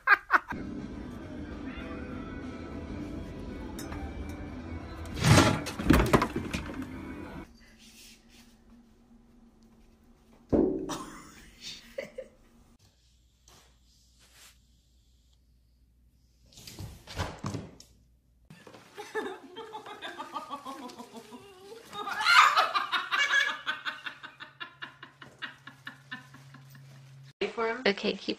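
The audio has lost LE Audio frames between 0.55 and 0.62 s: about 45 ms of audio, consistent with six dropped frames, is scattered over 60 ms, with the longest gap around 20 ms. The LC3 decoder conceals each gap by repeating the previous spectrum with randomised signs, so the passage turns into a brief noisy smear.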